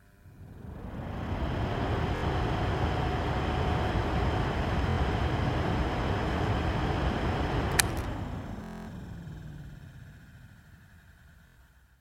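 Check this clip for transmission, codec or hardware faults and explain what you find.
There is one fault, a Bluetooth stutter, heard four times: 2.16 to 2.25 s, 4.90 to 4.98 s, 8.64 to 8.89 s, and 11.47 to 11.58 s. Late or lost packets made the receiver replay its last short slice, producing a buzzing stutter of about 70, 70, 230 and 90 ms. The 230 ms run fits roughly ten lost packets. Unlike a silent dropout, the gap is filled with repeats, and the sound resumes further along.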